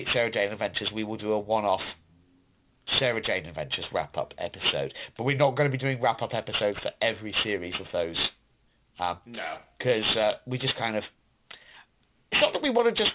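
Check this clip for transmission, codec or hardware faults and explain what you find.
One fault runs through the whole clip: aliasing. The speech was resampled down, likely to 8 kHz, without an anti-alias filter, so content above 4 kHz folds back as harsh, metallic sibilance nearly as loud as the speech.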